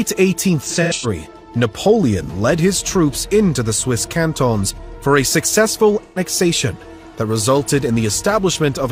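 From 0.63 to 1.06 s there's AAC frame loss with concealment: scattered dropouts, longest around a tenth of a second, where the decoder patches from the last good spectrum, giving a smeared, noisy or phasey stretch. It recurs at 6.03 to 6.18 s, with three frames, about 128 ms, lost.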